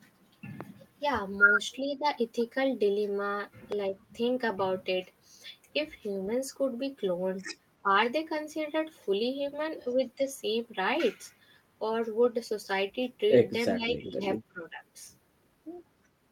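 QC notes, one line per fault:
0.61 s and 3.72 s, loud pop: a single sharp pop about 10 dB above the speech, which carries on underneath; likely a brief voltage spike from a switch or static.
1.8–2.05 s, 7.83–7.89 s, 13.72–14.22 s, 14.51–14.83 s, speech suppressed in double talk: the voice dips by roughly 10 to 15 dB, likely from the echo canceller turning it down while the far side was talking.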